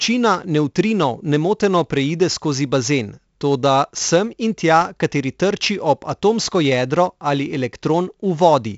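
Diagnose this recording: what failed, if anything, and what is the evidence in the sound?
The failure is at the codec stage: this speech has been through 4-bit ADPCM compression, and it's heavy. Every louder syllable drags a gritty hiss along with it, since the quantising error rides the signal level, and sharp onsets crunch where the adaptive step can't grow fast enough. Nothing comes through above about 7.7 kHz for the whole clip, so it's dull too, which fits a 16 kHz stream at 64 kbps.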